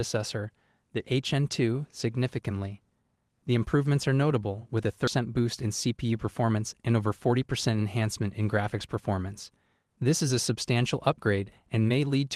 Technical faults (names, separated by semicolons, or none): skip ahead; jitter buffer speed-up